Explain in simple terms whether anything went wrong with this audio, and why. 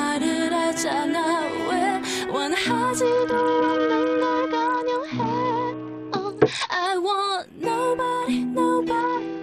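Bluetooth SBC bit pool drop, 3.05 to 6.86 s and from 9.01 s to the end: a congested wireless link forced fewer bits, dulling the treble and adding gritty noise.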